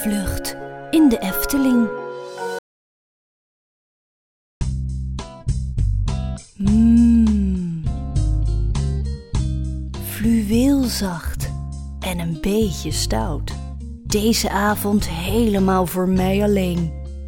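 At 2.59 s the sound cuts off abruptly and does not return until 4.61 s: an audio dropout to silence lasting about 2.02 s. The gap is silent, with no background hiss or room tone. That sets it apart from a noise gate or a quiet passage, where some floor remains. The input was likely lost, through a disconnected device or failed link, while recording continued, so the audio from that span is simply missing.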